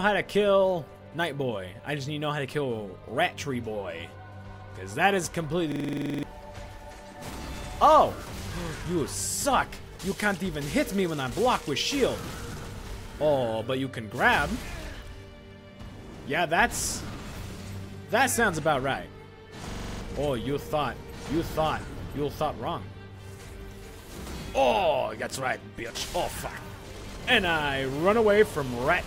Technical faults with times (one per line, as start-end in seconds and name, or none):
5.72-6.23 system hang loop
19.71-20.01 system hang loop